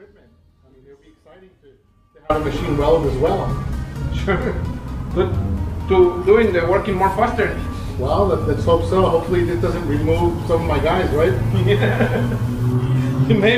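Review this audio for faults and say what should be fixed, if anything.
An audio dropout to a faint residue is already under way when the clip begins. It lasts until 2.3 s. During that stretch only a faint trace of the sound remains, roughly 30 dB below its normal level. At 2.3 s the full signal snaps back in abruptly, with no fade. The cause is likely a brief break in the signal path ahead of the recorder, while the input itself stayed live and kept capturing leakage. Secure and monitor every connection before recording, so any break is caught and fixed at once.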